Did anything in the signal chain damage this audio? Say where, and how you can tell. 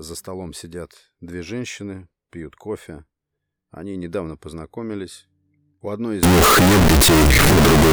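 Yes. From 6.23 s, after "одной из", likely float read as integer in sample-format conversion: a near-square waveform at an almost fixed, high level, with broadband spectrogram energy.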